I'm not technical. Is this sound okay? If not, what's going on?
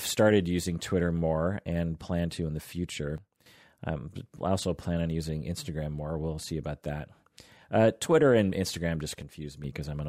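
No. There are two kinds of fault.

The first is a sudden gain jump. At 3.18 s, right after "plan to in the", the speech and its background noise suddenly drop to a much quieter level until 3.46 s. At 9.22 s they drop again, less deeply, until 9.64 s. The likely cause is a volume change applied instantly instead of being smoothed in.

The second is a corrupt frame decoded. At 9.42 s, during that second quiet stretch, there is a brief, faint glitch. A couple of damaged chunks of the compressed audio were played anyway, so the sound briefly landed at the wrong pitches.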